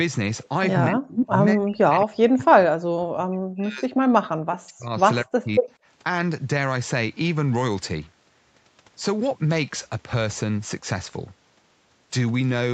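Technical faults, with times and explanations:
0.88–1.36 s, 1.54–4.94 s and 5.24–5.70 s, speech suppressed in double talk: with both ends likely talking at once, the echo canceller could not tell the local talker from loudspeaker echo and clamped down on everything. The speech sinks by roughly 30 dB in the first stretch and about 40 dB in the later two. The longest run holds for around three seconds.
1.08–1.26 s and 5.55–5.73 s, echo leak: the far end's loudspeaker output likely reached its microphone, and the canceller failed to remove it, so the sound came back about 231 ms late. Each leak is a brief scrap, about as loud as the speech itself, overlapping the suppressed stretches. It is heard as a delayed repeat of the voice.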